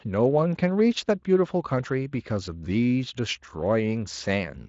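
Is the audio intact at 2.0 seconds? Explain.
Yes, the speech at 2.0 seconds is intact, with nothing disrupting it beyond the light coloration of the Speex coding that runs through the clip.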